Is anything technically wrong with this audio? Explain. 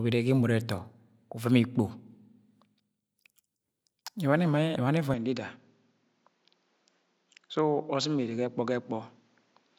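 Yes. From 5.14 s to the end, the speech abruptly turns duller and slightly quieter, with a faint new hiss and no gap. The likely cause is an input switched to a poorer device, whose narrower band removes everything above 7.6 kHz. A spectrogram shows the top band going suddenly empty, and the waveform steps down a little.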